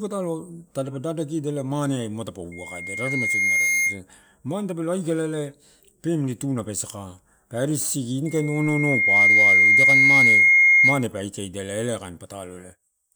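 Just after "ma tadapa", from 2.52 to 4.00 s, a loudspeaker feedback squeal rises at 2.1 kHz, and it returns from 8.26 to 11.07 s. A microphone is hearing its own loudspeaker, so that one frequency is amplified around the loop until it feeds itself. Unlike a steady interference whine, each squeal swells from nothing over roughly a second. The first peaks about 5 dB above the speech, the second about 15 dB.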